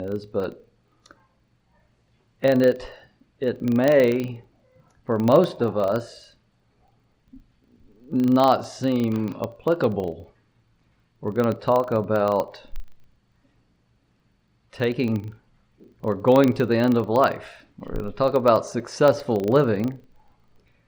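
Throughout the clip a filter restarted on every block, resetting every 40 ms. This gives a 25 Hz level-following buzz, seen as evenly spaced waveform ticks and thin vertical spectrogram lines.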